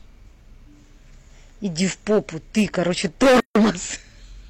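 From 1.81 to 2.18 s the speech hits hard clipping. The signal runs about 6 dB past what a stage in the chain can pass, so the loudest peaks are sheared flat. The flat tops add harmonics that cause a crackle on each peak. On the waveform the crests show as level plateaus. On a spectrogram faint vertical streaks of energy rise into the upper kHz range at those moments. The clipping returns far more heavily from 2.58 to 3.7 s, now about 14 dB over. Almost every loud stretch is squared off and every loud sound takes on a harsh fuzz, with dense high-frequency smearing across the whole spectrogram for that span.

Inside that second stretch, from 3.40 to 3.55 s, comes a gap at a join of encoded pieces. It is a silence of about 154 ms, opening in the middle of continuous speech, and the sound then resumes exactly where it broke off. It points to separately encoded segments butted together untrimmed, with the encoder's start-up delay and final-frame padding left in. 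The waveform drops to a flat line, its edges smeared by the codec. The spectrogram shows a clean blank column cutting through the distortion.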